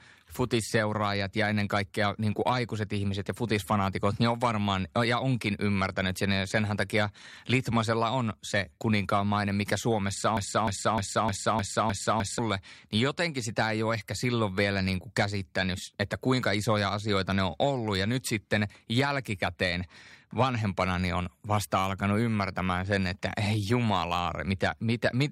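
At 10.37 s the speech sticks: a fragment of about 0.31 s plays seven times back to back, identical each pass, until normal sound resumes at 12.39 s. The stutter is exact and mechanical, like a broken-record loop, and whatever should have been heard across those two seconds is gone. The likely cause is a stall in the player, encoder or stream, which kept re-sending the last short piece it still held in memory.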